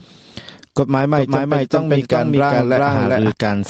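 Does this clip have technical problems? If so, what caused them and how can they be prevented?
Yes. Gain pumping runs throughout: the input gain was likely set far too high, so a fast limiter clamps down on every loud sound. The gain swings by around 15 dB, leaving the sound squashed. Setting the microphone gain lower, so the limiter rarely engages, prevents this.

A doubled audio track appears from 1.16 s to 3.32 s: a second copy of the same audio, likely from a slower duplicate capture path or a misaligned edit, follows roughly 0.4 s behind at about the same level. It is full-band and dry, with no decay or room colour, and begins and ends abruptly. Making sure only one capture path feeds the mix, and checking edits for overlapping copies, prevents it.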